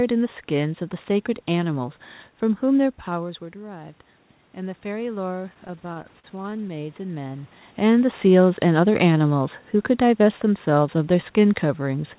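Automatic gain rising runs from 3.07 to 7.59 s. Around 3 s the talker moves away and the level at the microphone drops by about 15 dB. The gain control reacts by slowly raising its gain by about 7 dB. Voice and room noise swell together over several seconds instead of the voice simply returning. The recovery is incomplete and gradual. It settles near 7.5 s, when the talker moves back.

Repeated stalls (stutter) occur between 5.54 and 6.73 s, in the middle of that gain rise. Packets arrived late or too slowly, so the jitter buffer ran dry many times in quick succession. Each time, the receiver stretched the last bit of sound to bridge the wait. These fills total 224 ms, and the longest gap is 44 ms, so about a fifth of that stretch is concealed. Nothing is lost, but the sound drags and judders. All of this sits within the narrow band of the G.711 call codec, with nothing above 4 kHz, consistent with a 64 kbps telephone link.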